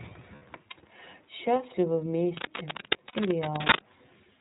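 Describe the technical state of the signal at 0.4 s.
At 0.4 s the signal is inside a run of lost iLBC frames from 0.35 to 0.43 s. The decoder fills the roughly 60 ms gap, which fits two 30 ms frames, by repeating the last pitch cycle mixed with noise, giving a brief held, buzzy vowel. Underneath, the iLBC codec is plainly audible: a band-limited, slightly rough and synthetic sound consistent with its 13.33 kbps mode.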